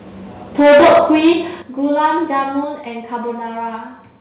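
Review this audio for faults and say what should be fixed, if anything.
Microphone overload is the likely cause of the harsh crackle from 0.59 to 1.32 s. The input gain was set so high that the loudest speech overshot the converter's ceiling by about 14 dB, and around a third of the samples in that stretch were flattened at the converter's limit. The cut-off peaks add a gritty, buzzing distortion to every strong syllable. A second, much milder overload at 2.04 to 2.06 s goes only about 1 dB over and clips a small fraction of samples, giving a brief rough edge.

Microphone volume stepped down is the likely cause of three sudden level drops. At each one, something in the chain cut the device's input gain in a single jump instead of riding it smoothly. The first cut, at 0.61 s, is about 2 dB and comes right as the heavy clipping begins. The second, at 1.62 s, is about 9 dB, a clear lurch just after that distorted passage ends. 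The third, at 2.64 s, is about 4 dB and follows the small overload. With each step, the speech and the background fall together, so the loudness sounds like it jumps down a stair. All of this reaches the listener through a narrowband call path with nothing above 4 kHz, which fits G.711 A-law.

To prevent this, set the microphone's input gain lower before the call so that peaks stay well below full scale, and the software never has to cut it abruptly.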